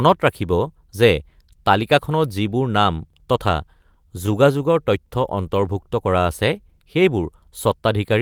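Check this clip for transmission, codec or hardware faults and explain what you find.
Two transmission faults affect this speech clip. Both are packet-delivery problems on the network side.

From 3.79 to 5.09 s, just after "তালিকাখনত যিবোৰ নাম তথা", there are scattered short gaps. About seven packets arrived late or went missing, and the receiver filled each hole by extending the preceding sound. The result is brief ticks and smears, each around 15 ms at most.

From 5.35 to 6.24 s there is a jitter buffer slow-down. The receiver repeated pitch periods to rebuild its reserve, adding 62 ms. Speech runs at 94% speed with unchanged pitch, so it sounds slightly drawn out.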